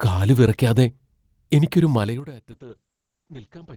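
From 1.96 to 2.36 s the speech drops by roughly 25 dB. Instead of gliding down like a fader, the level falls in stair-steps of about 3 dB, roughly twenty per second. Each jump leaves a tiny click, so a fine ticking rides on the sound while the level moves. This is zipper noise. Unlike a smooth level change, the ticking stops as soon as the level settles.

From 2.52 s to the end the sound turns rough and watery, and the top end collapses from a 20 kHz ceiling to about 8 kHz, staying at its worst for about 1.1 s. This is a call bitrate drop: the bandwidth estimate fell and Opus coded far more coarsely, which fits a fall from around 32 kbps to 8 kbps. The texture degrades without the gaps or stutters that packet loss would leave.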